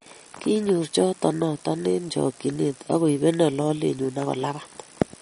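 A speech recording carries audible MP3 compression damage from start to finish, likely from encoding at a low bitrate in the region of 40 kbps. Nothing is present above about 10.6 kHz, where the encoder has cut the treble to save bits, which dulls the top end. Short of bits, it also drops weak spectral lines that flicker on and off between frames, giving a watery, swirling texture, metallic chirping on s sounds, and smeared attacks.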